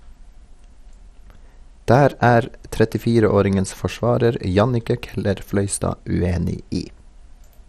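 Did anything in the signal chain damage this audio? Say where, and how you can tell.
Yes, at the codec stage throughout: speech sounds dull and gurgling, and a spectrogram is blank above 14.9 kHz, likely MP2 compression starving sub-bands of bits.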